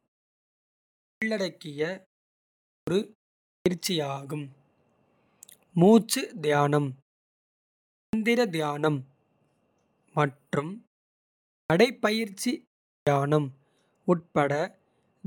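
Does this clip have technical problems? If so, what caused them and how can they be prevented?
Yes. Clipped starts after a pause occur at 1.05, 2.69, 3.48, 7.95, 11.51 and 12.9 s. Each time, the output device wakes from idle after a pause of 0.31 to 1.05 s and swallows the first 170 to 190 ms of speech. Keeping the output stream active through silences prevents this.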